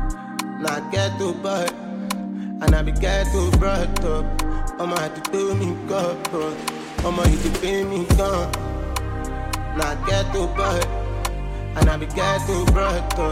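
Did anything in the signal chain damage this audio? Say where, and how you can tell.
No, nothing in the signal chain damaged this audio.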